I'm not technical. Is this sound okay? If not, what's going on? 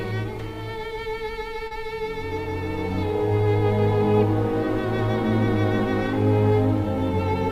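No. At about 1.67 to 1.74 s there is a brief smear or wobble. This is short concealed packet loss: roughly 40 ms of audio arrived too late, so the receiver papered over the gap by stretching out the preceding sound, then blended back.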